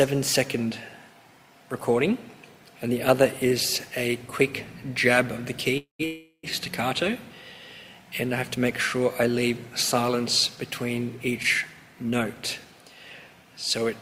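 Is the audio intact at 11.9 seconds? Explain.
No, a jitter buffer speed-up runs from 11.77 to 12.73 s. The receiver trimmed short pitch-period slices in quick succession to shed about a tenth of a second of excess buffered delay, so the sound plays at 108% speed, hurried but unchanged in pitch.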